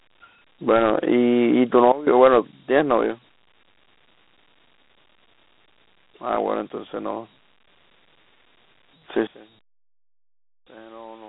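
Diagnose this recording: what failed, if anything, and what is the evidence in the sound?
The speech sounds narrow and gritty throughout, with a coarse hiss trailing every phrase, a line band of roughly 250 Hz to 3.7 kHz, and nothing above 3.9 kHz. That points to Dialogic VOX ADPCM at the codec stage, which fits 4-bit samples at 8,000 per second, or 32 kbps. The coarse step quantisation produces the grit.

The level falls abruptly at two points: by about 16 dB from 1.92 to 2.07 s, and by about 22 dB from 9.27 s to the end. Background noise drops together with the speech each time, the signature of a sudden gain jump. The likely cause is a digital gain step applied in processing without a ramp.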